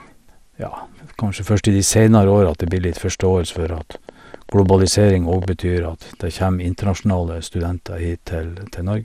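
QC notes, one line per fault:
Throughout: MP2 compression. The sound is dull and granular, with a gurgling edge and nothing above 15.9 kHz, likely from MPEG Layer II coding at around 80 kbps, where too few bits shut off upper sub-bands and leave the remaining ones coarsely quantised.
2.49–5.45 s: train of clicks. About thirty similar pulses tick over the sound at an uneven pace, near 9.8 per second, peaking about 5 dB above the signal. This is likely interference or a faulty connection injecting repeated impulses.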